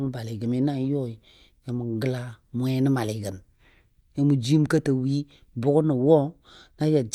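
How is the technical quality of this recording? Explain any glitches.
No technical glitches can be heard in this recording, and the speech signal holds steady without any dropouts, distortion or other faults.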